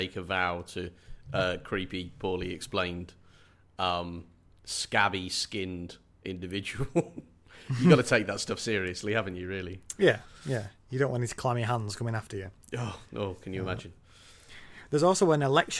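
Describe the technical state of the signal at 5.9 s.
At 5.9 s the speech comes through intact, with no audible fault at that point.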